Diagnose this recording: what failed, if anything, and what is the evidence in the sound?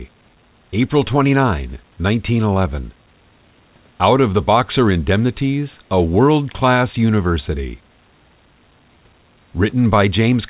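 Nothing failed, and the sound shows no evidence of a fault; the top ending at 4 kHz is simply what the G.711 call path leaves.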